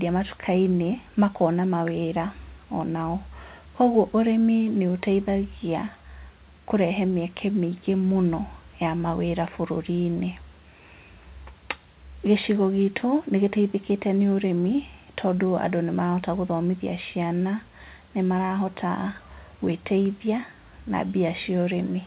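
Nothing goes wrong in this speech; it just comes over an ordinary call connection, and the way everything stops at about 4 kHz fits the usual telephone-grade G.711 coding.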